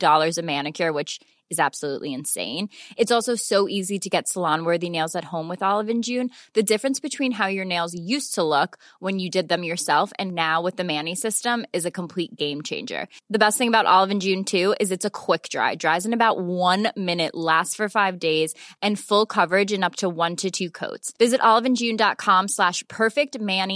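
No technical faults can be heard anywhere in the recording.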